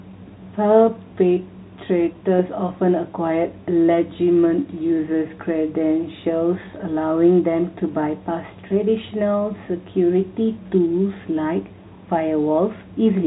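No technical faults occur at any point in this speech, so there is nothing to place in time order.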